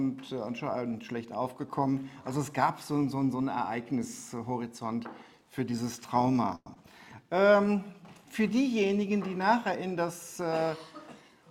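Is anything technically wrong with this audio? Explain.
Yes, four timing faults from packet delivery and jitter buffering.

At 6.55–6.68 s, a call audio freeze: the last sound is stretched into a fading buzz, then about 20 ms of silence, before the audio resumes where it stopped. This is likely the jitter buffer running empty while packets were held up, so the gap is inserted rather than missing.

At 6.74–6.77 s, a skip ahead: roughly 70 ms of audio is dropped and bridged by only a 12 ms fill, so playback jumps forward almost seamlessly.

From 6.92 to 7.24 s, a jitter buffer slow-down: repeated pitch periods add 44 ms, running the audio at 88% speed at unchanged pitch and audibly drawing sounds out.

From 11.07 to 11.50 s, a jitter buffer speed-up: short pitch-period pieces totalling roughly 70 ms are removed, so the audio plays at 114% speed and sounds hurried.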